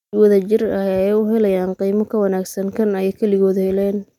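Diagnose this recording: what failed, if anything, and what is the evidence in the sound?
Nothing failed: no stage of the chain leaves any audible evidence of a fault anywhere in this speech recording.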